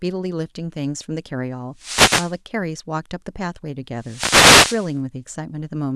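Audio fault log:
1.76–2.37 s and 3.98–4.98 s, wireless microphone noise hit: the FM radio link faded as reflections cancelled, so receiver noise rose as a static swish over the speech.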